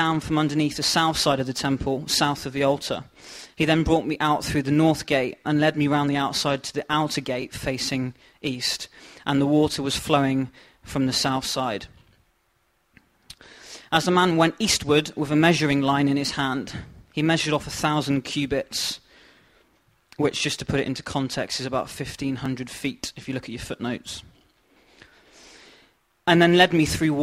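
At 2.41, 7.42, 12.43, 17.44 and 22.46 s, overlapping chunks replay 12 ms of audio at each 5-second block boundary, giving a regular click or stutter. On the waveform, a short segment repeats with a discontinuity at the seam. The spectrogram shows thin vertical lines.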